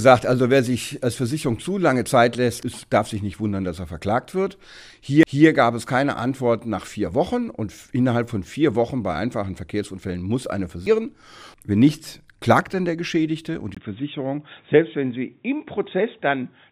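At 5.23 s and again at 10.86 s the CD player skips. Each time the laser loses its track and lands on a different turn of the disc's spiral, so the player mutes for only a few milliseconds and resumes from another point. Both are heard as a tiny tick followed by an abrupt jump in the audio, a discontinuity of roughly a tenth to a few tenths of a second of material.

From 13.75 s to the end, the input was likely switched to a poorer device. A gap of about 20 ms marks the change, and after it nothing reaches above 3.8 kHz, so the sound turns duller and boxier. The loudness stays much the same. A faint new background noise comes in, sitting far below the signal.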